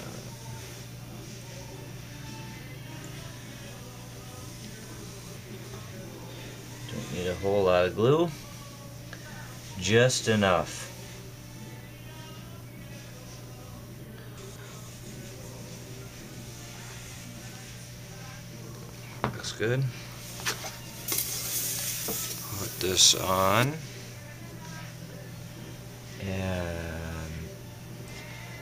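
Around 5.37 s the first case of frames out of order turns up, running to 5.92 s. Two neighbouring blocks, each about 279 ms, got swapped, so that stretch plays back-half first. You hear a garbled flutter. The same thing recurs more briefly at 8.43 to 8.62 s with blocks of about 93 ms, and at 14.38 to 14.75 s with blocks of about 186 ms. Nothing goes missing, it's just reshuffled.

Then from 21.08 to 23.64 s there's pre-emphasis left on. The treble boost of an FM-style 75 µs curve was applied but the matching de-emphasis never came, so around 10 kHz things sit about 14 dB hotter than at 1 kHz. That section turns thin, bright and hissy on the sibilant edges.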